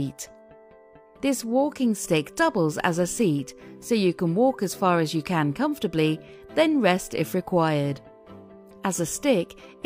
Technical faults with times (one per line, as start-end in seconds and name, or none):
none